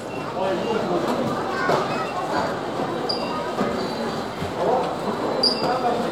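No technical faults can be heard in this recording of sounds. Nothing in it points to a break, dropout or distortion introduced along the way.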